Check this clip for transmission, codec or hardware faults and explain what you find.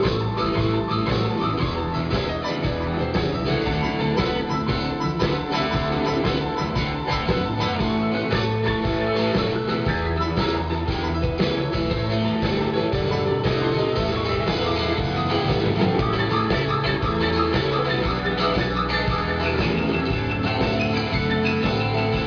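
No transmission, codec or hardware faults can be heard here.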